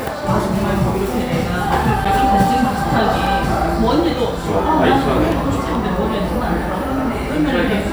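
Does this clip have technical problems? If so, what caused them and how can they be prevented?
Yes. There are three blocks of digital silence, at 2.05 s, 3.26 s and 5.32 s. The first gap lasts about 8.7 ms. The other two last 2.9 ms each, which fits a 128-sample buffer. At each point the sound cuts out and returns without a fade. The hard edges produce a tick or small pop rather than an audible hole. This most likely happens because the output buffer is not filled in time. To prevent it, use a larger buffer and keep other load off the audio processing thread.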